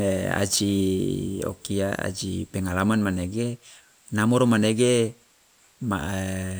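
No technical faults can be heard anywhere in this speech recording.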